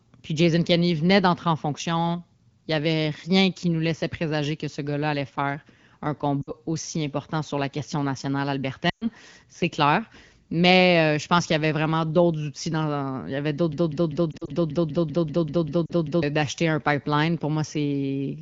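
At 6.41 to 6.52 s the speech smears and dips for about 60 ms. These are lost AMR speech frames: the wideband decoder, which here runs at 12.65 kbit/s with only light coding damage, missed checksums and rebuilt the gap from the last good pitch and vocal-tract settings with falling gain. At 8.89 to 9.08 s a longer run of about 120 ms, which fits six 20 ms frames, drops the sound to near silence within two frames. The voice then returns weak and rough.

After "dans il y avait", from 13.73 to 16.23 s, a fragment of about 0.2 s repeats exactly, back to back, 13 times before "d'acheter un pipeline". This is a broken-record loop, likely from a stalled player or stream resending its last buffer, and the speech that belonged in those seconds is gone. Unlike frame concealment, the repeats do not fade or drift.

Within the loop, brief concealment dips recur. One set is scattered over 14.32 to 14.50 s, with no gap longer than about 40 ms. 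Another comes at 15.86 to 15.92 s.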